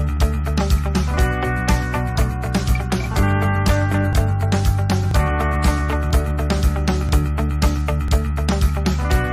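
Overlap between stream segments: the timestamps of neighbouring segments, about 1 s long, claim some of the same time, so the player discards the shared stretch even though it was never duplicated. Between 8 and 18 ms of audio vanishes each time, and the waveform jumps across the gap, producing a small click or skip at 1.17, 2.16, 4.13, 5.11, 6.11, 7.09 and 8.08 s, a roughly once-per-second rhythm matching the segment length.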